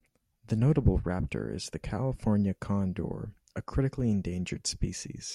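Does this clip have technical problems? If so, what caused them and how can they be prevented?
No, the speech has no audible technical faults, so there is nothing to trace or prevent.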